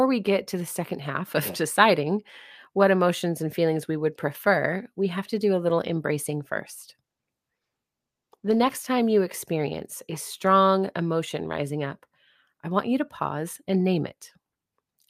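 From 7.04 s to 8.79 s the speech turns rough and watery, with the top end muffled away. This is a call bitrate drop: the encoder is starved of bits, consistent with a fall from about 48 kbps to around 13 kbps for roughly 1.7 s.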